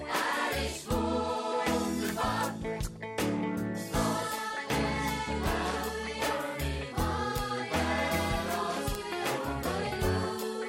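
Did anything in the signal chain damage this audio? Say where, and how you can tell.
Yes. Bit error spikes at 2.09, 5.44, 7.38 and 8.95 s are isolated broadband ticks unrelated to the surrounding sound. Three reach about -10 dBFS, the 5.44 s one about -28 dBFS. A flipped bit in storage or on a digital link throws the sample value by a power of two, which then snaps straight back.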